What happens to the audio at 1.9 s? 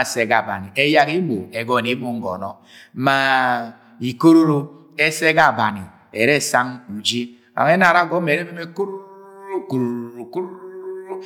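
Nothing goes wrong at 1.9 s: the speech runs straight through that moment with no dropout, click, distortion or other fault.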